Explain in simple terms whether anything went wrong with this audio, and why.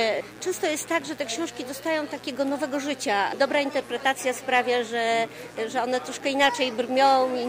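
There's a steady mains buzz running under the whole thing, from the first moment to the last. It's a raspy hum that never changes, sitting clearly below the main sound. It happens when something like a light dimmer, a power adapter or an unshielded cable lets electrical spikes from the wall supply leak in. Here it's locked to 60 Hz power, with a gritty edge from the many higher harmonics stacked on top.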